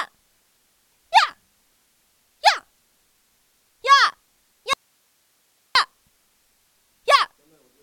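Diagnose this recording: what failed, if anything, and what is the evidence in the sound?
Audio dropout to a faint residue, 4.73 to 5.75 s: waveform and spectrogram fall abruptly to hiss roughly 50 dB down, likely from an intermittent analogue connection.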